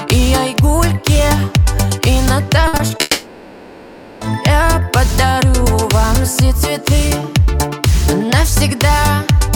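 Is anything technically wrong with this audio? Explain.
Yes, two network faults run back to back. From 2.67 to 3.01 s the sound turns choppy and robotic, with four short holes, the longest 60 ms, covering about a third of that stretch. This is repeated packet loss: each missing piece is patched by stretching the previous sound.

From 3.01 to 4.23 s a smeared continuation of the last sound, a buzz or hiss, fills the whole 1.2 s without falling silent. The likely cause is a long network dropout, during which nothing arrived and that section was never played.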